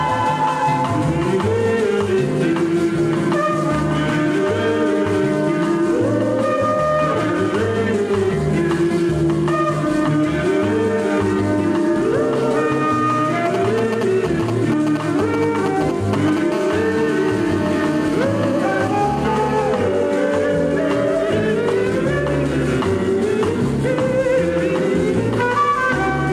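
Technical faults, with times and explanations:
Throughout: gain pumping. The level swings about 5 dB. Loud and quiet parts sit close together and sound squashed. The likely cause is excessive input gain driving a fast limiter or compressor.
13.46 to 16.39 s: GSM signalling bursts. Galloping clusters of short 216.7 Hz buzzes repeat, only about 5 dB below the main sound. A nearby 2G phone is exchanging short signalling bursts, and the audio circuit rectifies the radio pulses.
16.52 to 19.62 s: GSM phone buzz. A steady, hard, raspy buzz at 216.7 Hz appears, rich in harmonics and about 13 dB below the main sound. A nearby 2G phone on a call transmits continuously in bursts, and the circuit rectifies them into audio.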